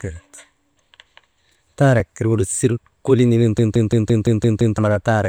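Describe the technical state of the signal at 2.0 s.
At 2.00 s the speech breaks off for about 2.4 ms: the waveform freezes flat, at a level that need not be zero, and then the speech carries on with only a soft tick. This is an underrun with held sample. The output buffer briefly ran dry and the converter held its last value until data arrived. No audio was skipped, so playback resumes exactly where it stopped and the join stays gentle.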